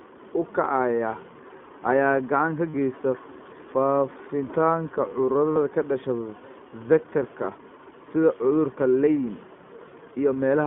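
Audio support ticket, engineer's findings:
iLBC codec, throughout. Speech band-limited to roughly 150 Hz–3.4 kHz, nothing above 4 kHz. Slightly rough, synthetic texture, plainly audible. Consistent with iLBC at 15.2 kbps, 20 ms frames: each frame's excitation coded independently, so detail is traded for robustness. Component: narrowband VoIP codec in call path.

Lost iLBC frames, 2.70 s (just after "gacan ka") and 5.52 s. Each about 40 ms: brief held, buzzy vowel-like fill, then clean recovery. Packet loss of two 20 ms frames. Decoder repeats last pitch cycle with added noise. Independent frames give near-instant recovery.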